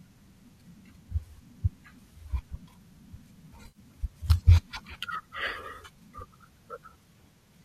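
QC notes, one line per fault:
1.10 s and 3.68–3.79 s: AAC frame loss with concealment. A 10 ms blip and a 70 ms stretch refilled from the last good spectrum sound smeared and phasey. On a spectrogram the harmonics blur into a smooth, noisy patch. The 10 ms gap fits one lost frame of a low-delay codec, likely AAC-ELD.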